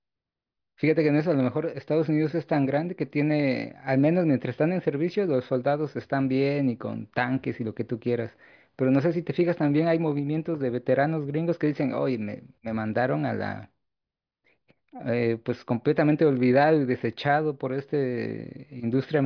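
Listening to this speech recording, nothing technical stood out as wrong at any point.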